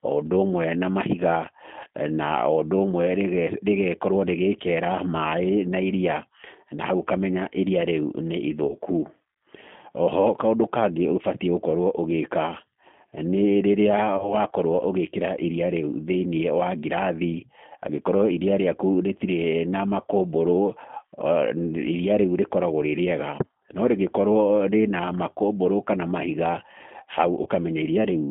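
Throughout, the sound has the narrow, slightly rough and synthetic quality of the G.729 codec, which points to an 8 kbit/s VoIP link. Only about 150 Hz to 3.5 kHz survives. The decoder rebuilds speech from a filter, pitch and sparse pulses, so the damage is plainly audible.

At 8.67 to 8.75 s, 14.17 to 14.35 s and 27.43 to 27.48 s there is VoIP packet loss concealed by the speech codec. Each fits one lost packet covering 30 ms. The decoder stretches the last sound into a buzzy tone or coloured noise that fades. Speech stays weak or smeared briefly afterwards.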